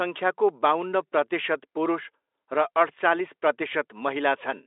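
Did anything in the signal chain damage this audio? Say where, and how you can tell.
No, nothing in the chain audibly damages this speech.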